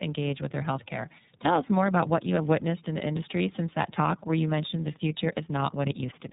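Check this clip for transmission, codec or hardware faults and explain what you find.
Rough, muffled and warbly speech from start to finish, with nothing above about 3.8 kHz, points to tandem speech coding. The audio sounds like it passed through two low-rate speech coders in a row, which fits iLBC at both ends of the link with a G.711 A-law hop between them. Each border decodes and re-encodes the signal, so the second coder models an already degraded signal. The result is more smearing and roughness than a single pass would produce.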